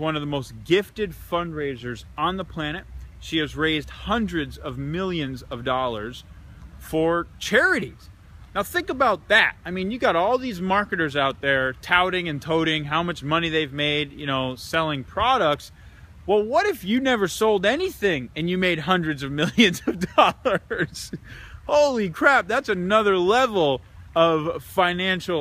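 Nothing stood out as a technical problem on listening.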